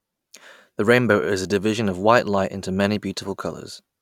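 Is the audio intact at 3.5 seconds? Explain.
Yes, the speech at 3.5 seconds plays through cleanly, with no dropout, click, distortion or other fault at that moment.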